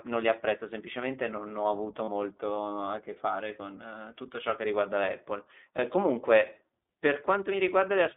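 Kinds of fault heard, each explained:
iLBC codec: narrowband speech coding at what sounds like 15.2 kbps, band limited to roughly 250 Hz to 3.6 kHz; spectrogram shows nothing above 4 kHz, voice slightly rough and synthetic.
Lost iLBC frames: after "semplicemente non ho avuto", about 40 ms at 2.04 s is filled with a repeated pitch cycle, slightly buzzy or breathy; waveform shows periodic copies, spectrogram smeared harmonics.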